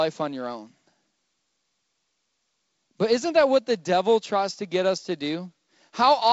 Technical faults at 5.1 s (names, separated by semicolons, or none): none